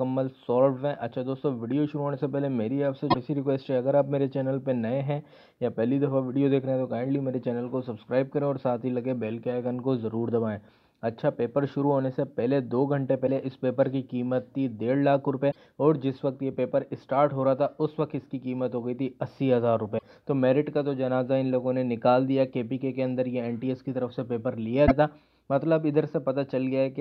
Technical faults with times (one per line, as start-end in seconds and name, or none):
3.07-3.15 damaged data in a compressed stream
13.23-13.29 damaged data in a compressed stream
15.48-15.56 damaged data in a compressed stream
19.95-20.03 damaged data in a compressed stream
24.83-24.91 damaged data in a compressed stream